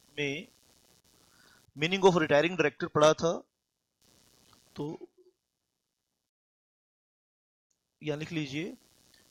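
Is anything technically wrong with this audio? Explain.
Yes, there are two problems. First, computer activity noise runs under the whole clip: a faint buzzy chirping, roughly 40 dB below the sound, pulsing at something like 150 times a second. It comes from processor or graphics load shifting the ground the audio circuit shares, so it follows the machine's activity, not the audio.

Second, there's a rebuffering stall from 6.30 to 7.70 s. The player ran dry on downloaded audio and just waited, so the sound drops to silence for about 1.4 s and then picks up exactly where it left off. Nothing's missing, but that gap adds time to the clip.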